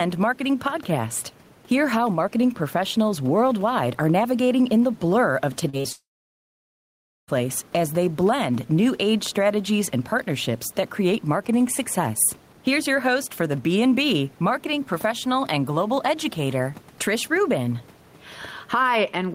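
Gain pumping runs through the whole recording. The room noise sits about 30 dB below the speech, and the gain is pulled down on every loud sound, a swing of roughly 5 dB. The likely cause is input gain set too high, with a fast limiter clamping down on each peak. On a waveform the peaks look flattened to a similar height, and a spectrogram shows the noise floor brightening in the gaps and dimming under speech.

Short concealed packet loss follows in a quick cluster: about 40 ms at 5.69 to 5.75 s, 20 ms at 5.77 to 5.81 s, and another 40 ms at 5.81 to 5.86 s. Each hole was filled by extending the preceding sound before blending back, so the passage smears and wobbles briefly. A spectrogram shows short stretches of held, over-smooth harmonics or even noise where fine detail should be. The waveform shows a repeated-looking, slightly too-regular cycle.

A long network dropout begins at 5.92 s and lasts until 7.30 s. 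The final sound is stretched into a short fading buzz or hiss, and then about 1.25 s of silence follows. The audio resumes with that stretch simply gone. The likely cause is that no packets arrived for well over a second. On the waveform there is a flat line after a brief decaying tail. The spectrogram goes blank, with not even the room noise visible, until the speech returns.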